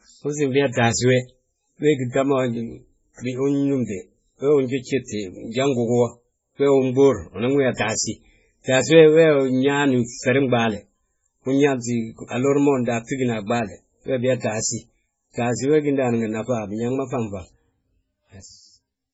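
Speech runs throughout with nothing above 7.7 kHz and the swirling, smeared texture of heavy MP3 coding, likely low-bitrate audio saved at a high bitrate, which fits an original near 16 kbit/s. Unlike a plain low-pass filter, the coding artefacts persist beneath the cut-off.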